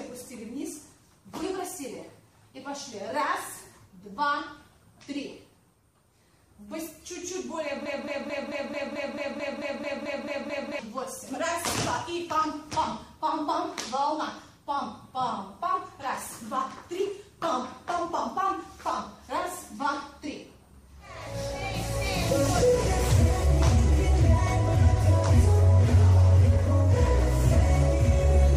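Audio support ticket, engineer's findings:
Playback or stream path likely stalled, re-sending last buffered fragment. Broken-record loop, 7.86 to 10.79 s: one 0.22 s slice repeats back to back, 13 times, identical each pass. Audio due in that window never arrives; sound resumes after 10.79 s with that span missing.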